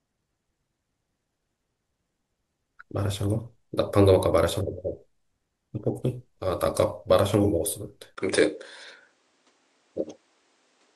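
Speech, and at 8.15 s there's a 20 ms dropout, then everything above 9.8 kHz vanishes and faint new background noise appears until the end: likely an input switched to a poorer device.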